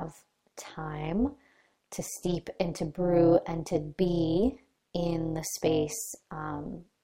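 Overlap-add ripple runs through this whole speech clip: the audio was split into windowed frames and rebuilt with an overlap whose window gains do not add up to a constant, so the level swings up and down once per frame. The swing is deep, about 11 dB, and repeats around 200 times a second, so the speech carries a metallic buzz with extra tones around the voice, laid over every syllable from start to finish.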